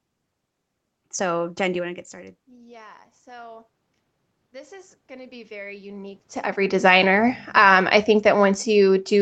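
Just after "do you", from 1.81 to 3.74 s, and again from 4.37 to 6.36 s, the speech and room noise swell together. This is automatic gain rising: the talker moved away, the input fell by about 24 dB, and the control added about 5 dB, then about 6 dB. From 6.72 s to the end, speech and background sink together. This is automatic gain falling, as the control lowers its gain on the louder input after the talker moved back in.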